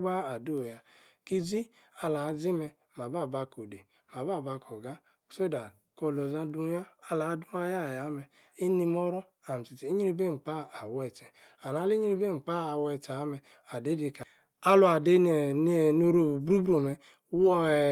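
No technical faults can be heard anywhere in the speech recording, and the signal holds steady throughout.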